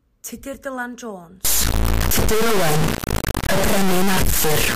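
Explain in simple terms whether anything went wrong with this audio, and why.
Something definitely goes wrong at about 1.45 s. From there to the end, the speech turns into a harsh, painfully loud buzz, like a square wave slamming between silence and maximum, and it falls silent in the quietest moments. That's an integer read as float fault. The sound points to audio stored as whole-number samples, likely 32-bit, being read as decimal numbers, so the values come out either near zero or way past full scale.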